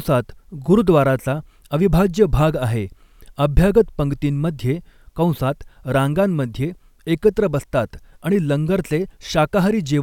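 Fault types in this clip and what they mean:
No technical faults are audible.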